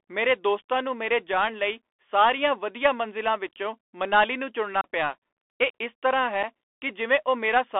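The whole clip runs through a Bluetooth CVSD headset codec, which points to a 64 kbps link. Everything is squeezed into roughly 300 Hz to 3.5 kHz, with gritty hiss underneath and scratchy s sounds where the one-bit step can't keep up.

Then there's unconcealed Bluetooth headset packet loss. Right after "ਮੰਜ਼ਿਲਾਂ ਵਿੱਚੋਂ ਮਨਾਲੀ ਨੂੰ", from 4.81 to 4.88 s, about 30 ms drops out, a few packets' worth, leaving an abrupt hole before "ਪਿਆ ਇਹ ਇਸ ਤਰ੍ਹਾਂ". A smaller 7.5 ms dropout hits at 6.43 s, just after "ਪਿਆ ਇਹ ਇਸ ਤਰ੍ਹਾਂ", and comes across as a brief gap.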